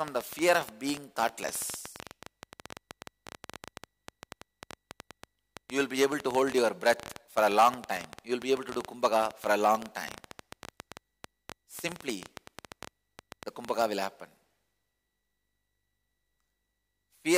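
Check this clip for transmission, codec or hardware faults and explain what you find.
There's one fault: a train of clicks running from 0.08 s to 13.83 s. Around 150 similar pops arrive at roughly 10.5 per second, unevenly spaced, peaking about 10 dB above the sound. It's likely outside interference or a struggling interface, and it ticks audibly through pauses too.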